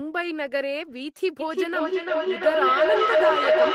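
From 1.4 s to the end of the clip there's a proper feedback howl. A microphone is picking up a loudspeaker carrying the same call, and every trip around that loop comes back louder. So instead of dying away, the sound narrows to a ringing tone around 700 Hz, with the loop repeating roughly every 300 ms, which is the loop's delay. It climbs to about 6 dB above the speech level and never gets broken before the clip ends.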